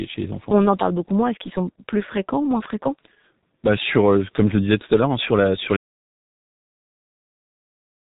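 From the start the speech carries G.723.1 codec damage: heavy 6.3 kbit/s coding leaves it muffled and hoarse, and the spectrogram shows nothing above 3.8 kHz. At 5.77 s, just after "hein sur la sur", an audio dropout to silence runs to the end. The sound drops to silence with no room tone, most likely because the input was lost while recording continued.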